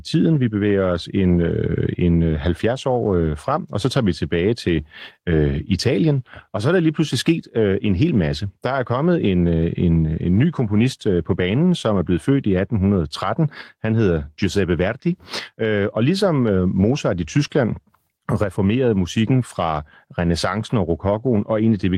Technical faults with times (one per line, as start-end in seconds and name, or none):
none